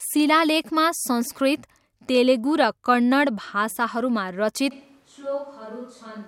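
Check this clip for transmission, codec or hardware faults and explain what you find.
One fault appears, a switch to a distant microphone. From 4.73 s to the end, the speech abruptly turns roomy and hollow, thinner in the bass, roughly 10 dB quieter, with room noise rising to around 30 dB below it. The close microphone's feed likely dropped, leaving a farther pickup.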